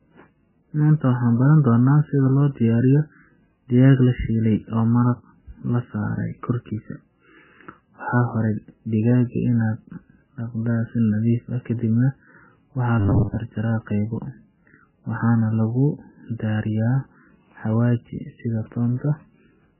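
From start to finish the speech sounds watery and swirly, with nothing above 3 kHz, so it comes across dull and muffled. The damage is heavy and points to MP3 compression, likely at a very low bitrate of around 9 kbps. Starved of bits, the encoder drops weak frequency lines that flicker in and out between frames, and it removes the treble above a fixed cut-off.

From 13.00 to 13.36 s the speech turns into a rigid, metallic buzz at 100 Hz that only loosely follows the original. This is robotic sound from repeated short buffers, likely caused by new audio arriving too slowly. The software filled the gaps by replaying the last 10 ms again and again, one over the 100 Hz rate, while most of the real audio in that stretch was skipped.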